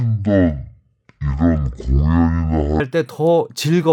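From 0.0 to 2.8 s, the speech plays as a section at the wrong speed. It runs at half speed, and the pitch drops by roughly ten semitones. Voices sound deep, slow and dragged. Playback against the wrong clock is the likely cause.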